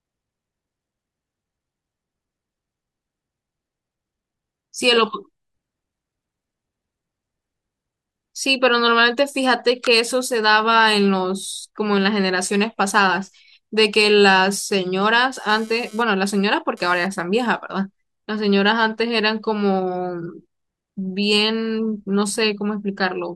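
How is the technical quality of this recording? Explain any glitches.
One glitch stands out: GSM phone buzz from 15.49 to 17.07 s. A nearby 2G phone sending data transmits in bursts about 217 times a second, and the audio circuitry rectifies those radio pulses. The result is a hard, raspy 217 Hz buzz with many harmonics, unrelated to the speech, about 26 dB below it.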